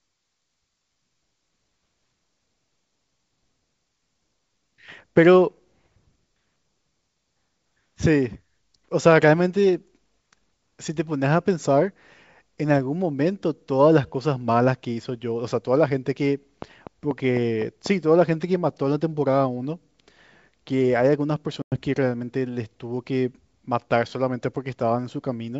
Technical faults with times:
16.62-17.87 train of clicks
21.62-21.80 packet loss on an ADPCM call

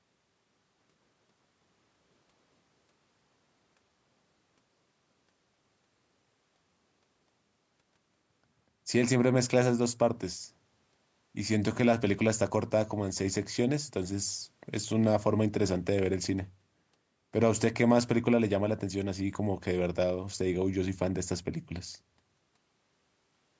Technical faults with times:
none

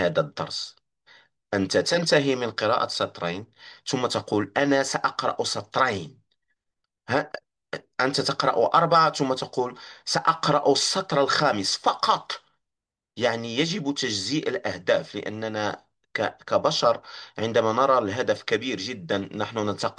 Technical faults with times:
none

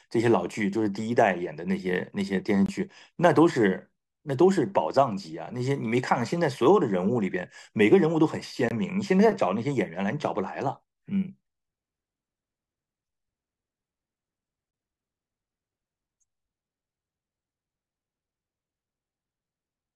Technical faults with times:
2.66-2.69 gap between chunks
8.69-8.71 gap between chunks
14.71-14.73 gap between chunks

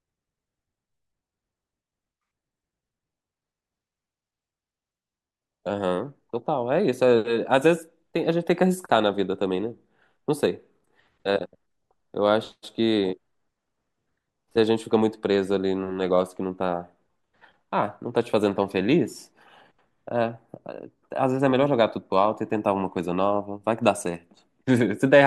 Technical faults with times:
none

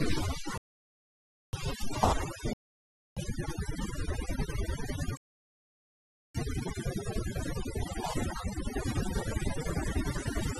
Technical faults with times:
0.00-10.60 overdone noise removal
0.57-1.53 rebuffering stall
2.53-3.17 rebuffering stall
5.17-6.35 rebuffering stall

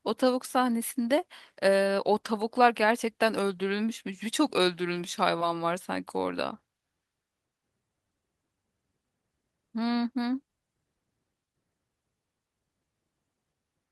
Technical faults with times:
none

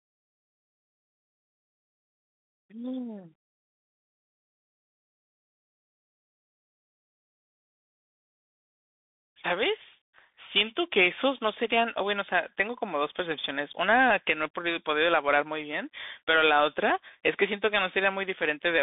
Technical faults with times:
0.00-18.83 Bluetooth CVSD headset codec

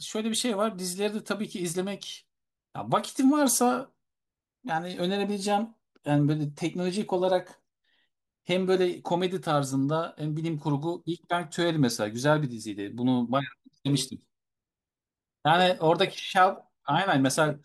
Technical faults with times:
none

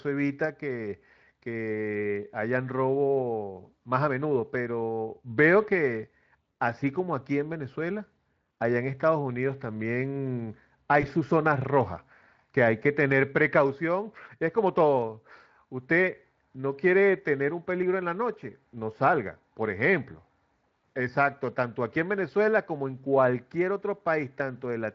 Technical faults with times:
11.01-11.06 VoIP packet loss concealed by the speech codec

